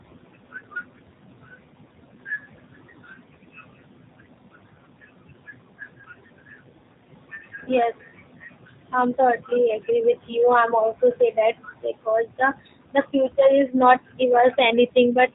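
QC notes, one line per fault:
throughout, noise suppressor artifacts: The suppressor estimates the steady background and pulls down each frequency band it judges to be noise, frame by frame, by as much as about 16 dB. The room noise, sitting about 17 dB under the speech, drops away in the pauses and swells back beneath the talking.
throughout, G.729 codec: The speech passes through G.729A at 8 kbit/s. This codec models the signal as a vocal tract filter driven by a pitch predictor and a handful of pulses per 10 ms frame, and it discards everything above 4 kHz. The speech therefore sounds band-limited and dull, with a plainly audible rough, synthetic edge. The leftover background noise takes on a warbling quality where the codec tries to model it.
7.64–7.72 and 10.31–10.35, VoIP packet loss concealed by the speech codec: Packets went missing, and the decoder filled each gap by continuing its last pitch and filter settings at falling gain. 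The first gap is about 30 ms of lost audio, which fits three consecutive 10 ms frames. The second is about 10 ms, consistent with a single frame. Each loss comes out as a brief stretched, smeared sound that fades. Because every frame builds on the previous one, the speech stays weakened and distorted for a short while after packets resume.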